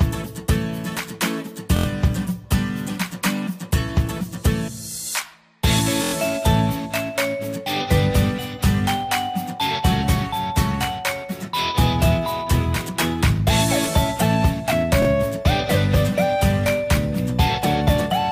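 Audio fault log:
1.77–1.86 s, 6.04–6.13 s, 15.02–15.07 s: repeated buffer. New audio reached the device late, so it replayed its last 23 ms block, which fits a 1024-sample buffer, several times over. Hard joins at each repeat make a short rattling stutter, with nothing apparently skipped.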